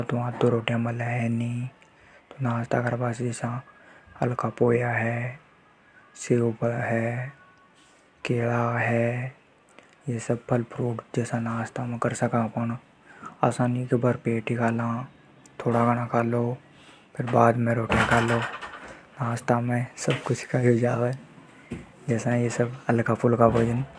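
No technical faults can be heard anywhere in it.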